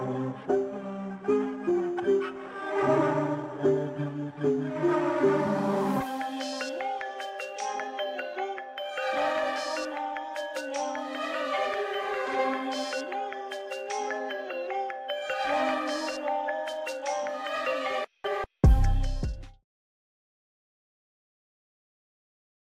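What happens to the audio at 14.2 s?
Nothing goes wrong at 14.2 s; the audio there is intact, with no dropout, click or distortion.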